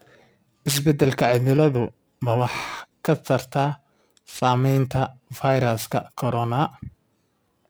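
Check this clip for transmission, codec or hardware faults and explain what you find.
Periodic clock jitter runs through the whole speech clip. Interference is wobbling the converter's sampling clock at a steady rate of around 2 kHz, so every component of the voice picks up sidebands spaced about 2 kHz above and below it, strongest on the higher-frequency content. It adds a rough, metallic edge that disappears in the pauses. On a spectrogram, ghost copies of the harmonics sit offset by that spacing.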